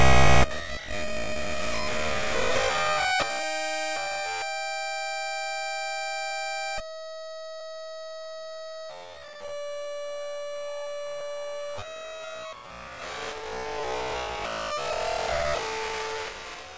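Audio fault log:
Throughout: resampler restarted on every block. The converter worked on each 50 ms chunk in isolation, so its filter lacked true neighbouring samples at every edge, leaving a small discontinuity there. These repeat as a 20 Hz ticking buzz riding on the sound, present only while something is sounding, which fits a conversion down to 16 kHz done block by block. A spectrogram shows thin vertical lines every 50 ms; the waveform shows tiny kinks at matching intervals.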